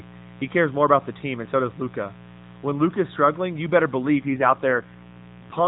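A mains buzz runs through the whole recording, about 20 dB below the speech. Sharp switching spikes tied to a 60 Hz supply leak into the signal path, and their harmonics stack up into a steady, raspy buzz that extends well above the fundamental.

From 4.16 s, right after "struggling you better", to the end of the clip, there is an AMR rate drop. The speech turns rougher and more synthetic, with no gap and no change in bandwidth. This fits the network forcing the codec down from 12.2 to around 5.9 kbps, leaving fewer bits to model the voice. Before this point the narrowband mobile codec's band limit and light coding roughness are audible.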